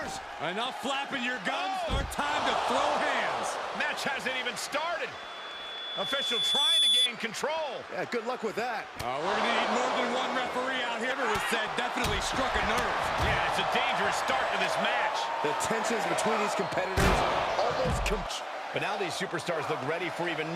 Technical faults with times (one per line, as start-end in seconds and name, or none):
5.14-7.09 loudspeaker feedback squeal